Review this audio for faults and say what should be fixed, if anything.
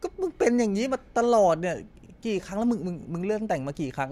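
Nothing here needs fixing, since no technical faults show up anywhere in this speech recording.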